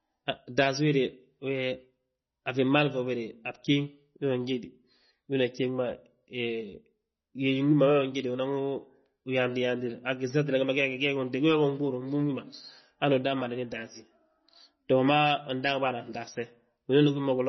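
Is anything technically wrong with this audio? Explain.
Yes. Throughout, the speech has a hard treble cutoff near 5.9 kHz and a watery, swirling texture, likely from heavy MP3 compression at a bitrate around 24 kbps, which starves and drops weak frequency lines.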